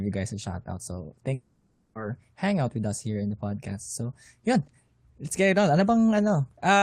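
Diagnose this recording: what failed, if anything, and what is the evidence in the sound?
Network stage. From 1.33 s to 1.97 s the speech breaks off. For about 0.6 s the last sound is stretched into a buzzy, fading tail, then a short stretch of near-silence before the speech resumes with that section missing. This is likely a long network dropout. The receiver concealed the gap by extending the final received audio until it decayed. On a spectrogram, harmonics smear into flat horizontal bands that fade out. The waveform shows a shrinking envelope and then a flat segment.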